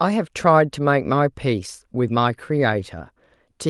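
A short stretch of speech, and nothing in it stands out as a technical problem anywhere along the way.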